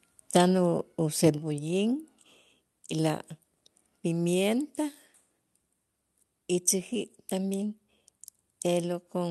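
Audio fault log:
1.38 s, microphone volume stepped down. The speech and the room behind it both drop by about 4 dB at once, with no fade. The step is too sudden for a talker moving away or speaking more softly, since everything falls together. This likely comes from call software lowering the microphone's input volume in one move after judging it too hot. The audio, which runs through a call codec whose top end stops near 12 kHz, stays at the lower level afterwards.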